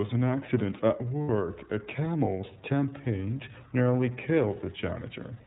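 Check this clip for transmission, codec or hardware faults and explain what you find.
You've got two problems, both from iLBC. The whole clip runs through the iLBC codec, and the damage is plainly audible. Nothing above 4 kHz gets through, so the speech sounds narrowband and a bit rough and synthetic. That's consistent with the 13.33 kbps, 30 ms frame mode, where each frame's excitation is coded on its own.

At 1.23 to 1.29 s there are lost iLBC frames. The decoder covers the gap by repeating the last pitch cycle mixed with noise, so you get a short held, faintly buzzy vowel. It lasts about 60 ms, which fits two dropped 30 ms frames. Because the frames stand alone, the voice comes back clean right after.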